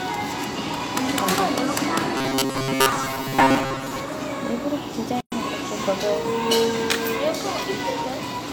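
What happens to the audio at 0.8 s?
Nothing goes wrong at 0.8 s; the audio plays through that moment intact, with no fault to be heard.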